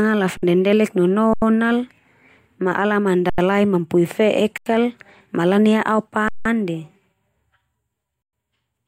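Speech with six underruns with held sample, at 0.37, 1.33, 3.30, 4.58, 6.28 and 8.22 s, lasting 54 to 171 ms. The 85 ms gaps fit a 4096-sample buffer. Each stops flat at a held level and resumes softly without skipping audio.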